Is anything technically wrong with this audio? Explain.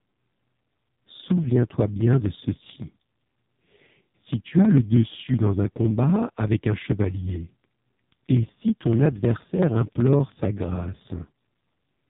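Yes, two faults are present.

AMR narrowband mobile codec, throughout: the speech passes through a low-bitrate mobile speech model, which fits a rate near 5 kbps. Nothing above 3.8 kHz survives, and the heavy coding makes the voice buzzy and synthetic.

Periodic USB or driver dropouts, from 0.06 to 12.02 s: every 63 ms, about a millisecond of audio is skipped, producing a steady train of regular ticks under the speech.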